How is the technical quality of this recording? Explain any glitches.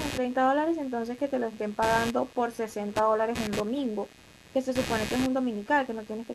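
The recording is compromised by one persistent fault: computer activity noise running under the speech for the whole clip. A buzzing, chirping texture pulses at roughly 150 times per second, sitting around 15 dB below the speech. It rises and falls with the computer's workload rather than with the speech, because changing processor, graphics or mouse load disturbs the ground shared with the audio circuit, injecting that activity as electrical interference.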